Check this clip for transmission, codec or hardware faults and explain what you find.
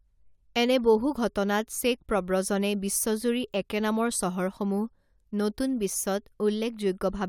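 No faults turn up in this clip.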